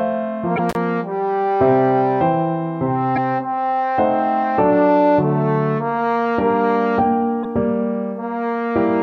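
Corrupted frames in the compressed stream, damaged data that the decoder misreads before it regains sync at the next valid header, cause three brief glitches at 0.54 to 0.59 s, 3.12 to 3.18 s and 7.41 to 7.46 s. Separately, an intermittent contact, a loose cable or plug opening for about 42 ms, cuts the audio out between 0.69 and 0.76 s, with crackle at each edge and faint hiss while the line is open.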